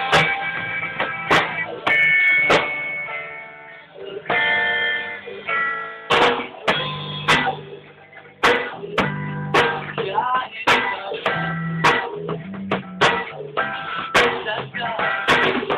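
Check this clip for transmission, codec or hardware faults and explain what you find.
No transmission, codec or hardware faults turn up anywhere in this clip.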